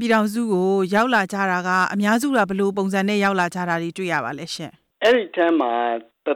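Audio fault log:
0.10–0.16 s, 0.96–2.42 s, 3.25–3.74 s, 4.14–4.17 s, 5.05–5.60 s: hard clipping. Peaks overshoot the available range by about 2 to 6 dB and are sliced flat. The result is a crackling, gritty fuzz on loud passages, harsher and more abrupt than soft saturation's rounded warmth.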